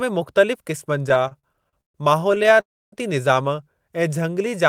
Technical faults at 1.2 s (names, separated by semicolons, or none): repeated stalls (stutter)